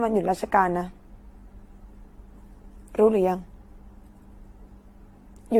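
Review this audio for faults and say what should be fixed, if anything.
Generation loss runs through the whole speech clip: it's swirly, hollow and smeared, with soft attacks and nothing above 19.3 kHz. That likely comes from roughly seven lossy AAC passes, each requantising on a shifted frame grid so the damage piles up. Next time, keep a lossless master and encode once, at the end.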